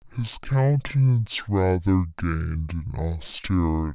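Throughout, a wrong sample rate plays the 16 kHz speech at 8 kHz: half speed, an octave lower. Unlike plain time-stretching, pitch and tempo drop together.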